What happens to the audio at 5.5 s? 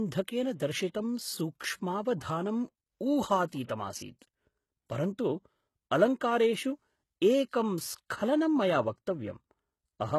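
At 5.5 s the speech carries the same HE-AAC compression damage heard throughout: sibilants sound gritty and metallic, with treble likely rebuilt by copying lower bands upward, consistent with a very low bitrate near 16 kbps. A spectrogram shows repeated, blocky upper bands and nothing above 12.3 kHz.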